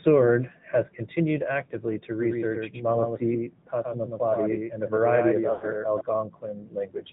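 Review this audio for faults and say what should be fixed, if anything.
AMR narrowband mobile codec, throughout: nothing above 4 kHz, with a buzzy, synthetic edge at 10.2 kbps. Unlike a simple low-pass filter, it adds vocal-tract modelling artefacts. Prevent it with a wideband or higher-bitrate path.

Doubled audio track, 2.21 to 6.01 s, starting after "has continued actively to": a copy about 5 dB quieter sits roughly 100 ms behind. It has no decay, unlike a room echo, and starts and stops abruptly. Its likely cause is a second, slower capture path. Prevent it by routing the source through one path only.

Lost AMR speech frames, 5.52 to 5.65 s: the decoder stretches the last good sound for 100 ms as it fades. Unlike a hard dropout, it smears rather than cuts. Prevent it with a cleaner radio link or error protection.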